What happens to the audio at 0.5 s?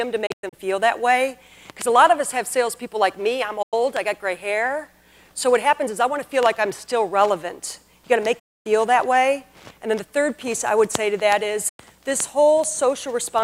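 The receiver stopped getting valid frames between 0.26 and 0.54 s, a digital broadcast dropout, and muted until good frames returned. About 160 ms of audio is lost in short holes, the longest 96 ms, each cut with a quick 8 ms fade.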